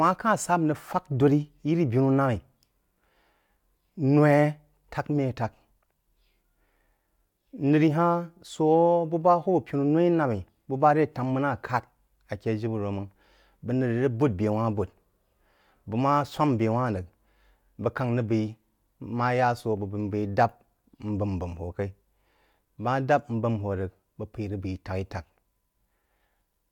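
Nothing in this speech recording stands out as a technical fault, so there's nothing to point to here.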